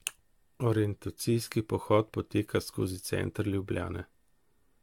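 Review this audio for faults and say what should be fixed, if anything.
Generation loss runs throughout the clip, from start to finish. The speech has a swirly, smeared, hollow character, with a watery shimmer on sustained sounds and softened consonant attacks, more damage than a single moderate-rate encode would leave. The likely cause is repeated lossy re-encoding, consistent with an AAC-LC chain around 96 kbit/s run roughly seven times. Each decode and re-encode quantises the signal again on a shifted frame grid, so the noise and spectral gaps from every pass pile up instead of staying fixed. To prevent it, keep the working copy in a lossless format through editing and transfer, and encode to AAC only once at the final delivery stage.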